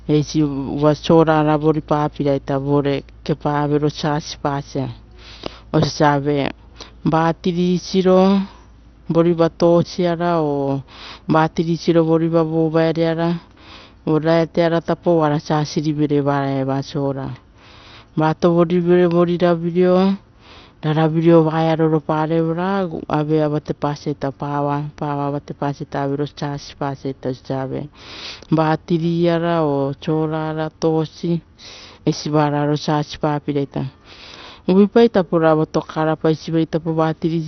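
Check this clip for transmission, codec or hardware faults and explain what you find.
One codec fault runs through the whole speech clip. The sound is dull and gurgling with granular distortion and nothing above 6.1 kHz. This is likely MP2 compression at a low bitrate, around 48 kbps, switching off upper sub-bands and coarsely quantising the rest.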